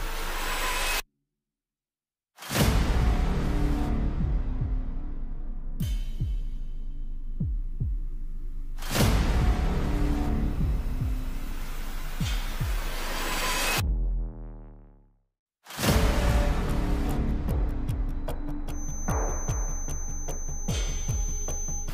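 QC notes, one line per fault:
18.65 to 21.94 s, feedback whistle. A thin, steady tone near 6.2 kHz appears behind the sound and holds to the end of the clip. It sits around 15 dB below the main signal and swells and fades slowly in level. It never builds or runs away. The likely cause is a loudspeaker-to-microphone loop resting just at the edge of feedback. At that point one high frequency keeps recirculating. It is sustained but never amplified into a full howl.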